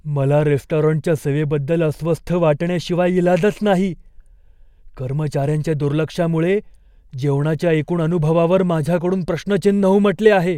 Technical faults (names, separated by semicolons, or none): none